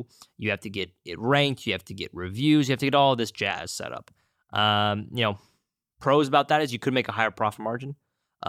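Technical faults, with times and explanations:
No technical faults audible.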